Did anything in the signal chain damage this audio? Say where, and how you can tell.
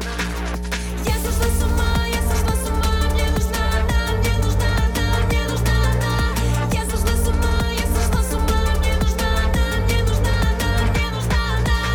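Yes, in the analogue wiring: a mains hum at 60 Hz runs throughout, only slightly quieter than the sound, from a ground loop or nearby transformer coupling power-line current. Its steady pitch and harmonics distinguish it from broadband rumble.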